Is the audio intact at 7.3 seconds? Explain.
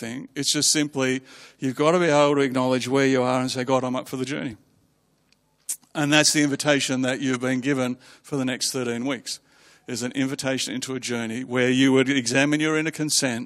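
No. At 7.33 to 7.37 s a single compressed frame reached the decoder with flipped bits and was played anyway: a corrupt frame decoded. Misread gains and codes push energy into wrong frequencies, giving a brief chirp, squeak, blip or burst of noise peaking near -15 dBFS.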